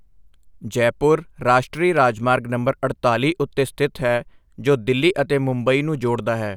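No technical faults are audible anywhere in the recording.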